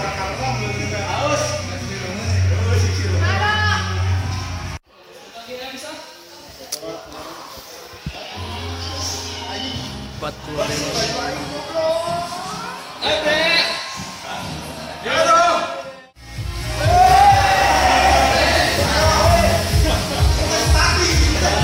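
No faults can be heard anywhere in the clip. Nothing breaks up, drops out or shifts in level along the way.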